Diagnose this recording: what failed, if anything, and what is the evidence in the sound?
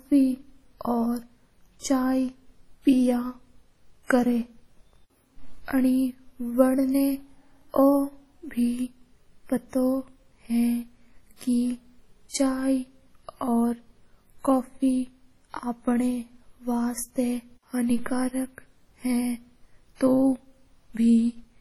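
The codec stage failed. Throughout the speech the sound is washy and ringing, with a hiss that swells and fades along with the voice and smears around each syllable for tens of milliseconds. The damage is heavy and points to a low bitrate, around 32 kbps, most likely WMA compression. On a spectrogram, weak components vanish in patchy holes and noise blurs around onsets, while content still reaches about 20.1 kHz. The waveform shows pre-echo before transients.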